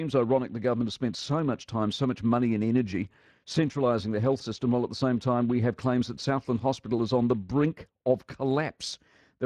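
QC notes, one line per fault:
Throughout, Speex codec: low-bitrate CELP coding, around 22 kbps here, starves the excitation, leaving speech plainly hoarse and noisy, with highs reduced to shaped noise.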